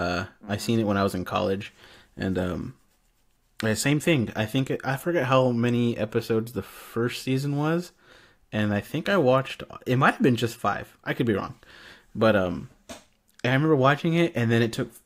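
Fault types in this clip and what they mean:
No technical faults can be heard anywhere in this speech recording. Nothing in it calls for an entry here.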